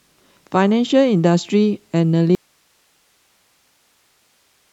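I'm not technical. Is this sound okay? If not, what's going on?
No, not quite. At 2.35 s the speech suddenly cuts out and never comes back, leaving just a very faint hiss until the end. That's an audio dropout to a faint residue, likely the signal getting lost while the recording line stayed switched on.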